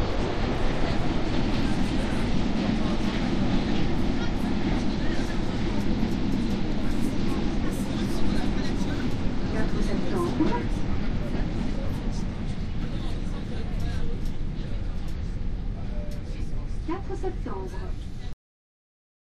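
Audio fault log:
18.33 s cut-off end: the final buffers of the recording were never written or played out, so the stream simply stops partway through whatever was sounding at 18.33 s rather than ending on its own. There is no fade or natural decay tail; the signal drops straight to digital silence, which holds for the remaining second of the clip, making the ending feel chopped off mid-event instead of finished.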